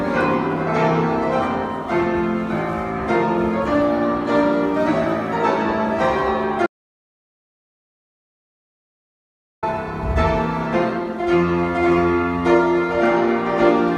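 At 6.66 s the incoming signal stops reaching the recorder, most likely because the input device or its link dropped out or was muted, while the writer kept filling the file with silence. This is an audio dropout to silence. The sound cuts off abruptly and leaves a dead gap with no background or room tone at all until it resumes at 9.63 s. Nearly 3 seconds of material is simply missing.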